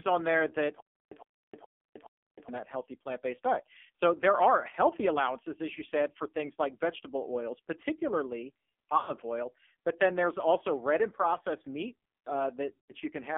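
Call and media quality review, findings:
AMR narrowband mobile codec, whole clip: buzzy, synthetic speech with heavy codec damage, consistent with a low AMR-NB mode near 5.9 kbps. Spectrogram shows energy confined to about 250 Hz to 3.5 kHz, hard-edged above, with smeared, pulse-like harmonics.

Stutter with silent gaps, 0.80 to 2.49 s: a 109 ms burst repeats four times at a 421 ms period, with 312 ms of digital silence between repeats. The audio in that span is lost. The likely cause is a player or stream stall that replays its last buffer on each retry. The waveform shows identical blocks separated by flat, silent stretches.

Lost AMR speech frames at 8.98 to 9.13 s and 12.78 to 12.94 s: each gap is 100 ms, which fits five 20 ms frames failing their checks. The decoder concealment stretches the last pitch and vocal-tract shape while the gain drops, then recovers rough. The spectrogram shows a frozen, fading harmonic smear.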